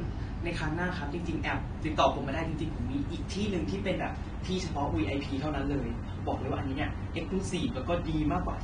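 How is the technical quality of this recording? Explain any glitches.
The recording is dull and smeared from start to finish, with nothing above 9.7 kHz and a warbling, fizzy texture on sibilants and sustained sounds. This is likely AAC compression, at a low bitrate fitting about 32 kbps, where the encoder lowers its cut-off and coarsely quantises or noise-fills the bands it keeps.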